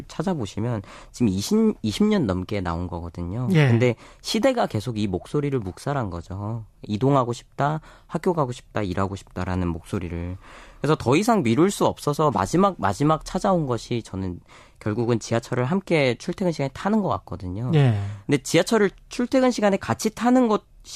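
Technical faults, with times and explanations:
No technical faults are audible anywhere in this recording.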